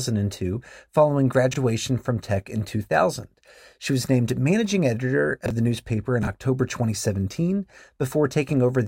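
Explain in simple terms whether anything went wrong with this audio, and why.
Three brief spots in this speech have chunks out of order: around 1.52 to 1.56 s, 5.46 to 5.50 s, and 6.23 to 6.27 s. Each time, a slice of audio about 21 ms long turned up one slot late, so it plays after the slice that should follow it. Nothing goes missing, but the swap leaves a short jumbled blip where the pieces butt together.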